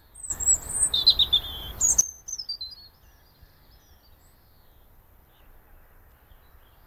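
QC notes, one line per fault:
0.30–2.01 s, sudden gain jump: at 0.30 s the whole signal, background noise included, steps up by about 16 dB with no ramp, and it steps back down just as abruptly at 2.01 s. The likely cause is a gain setting or bit shift applied instantly instead of being faded in. On the waveform this appears as a rectangular block of enlarged amplitude with vertical edges. On a spectrogram, every frequency band brightens together across that span, with hard boundaries at each end.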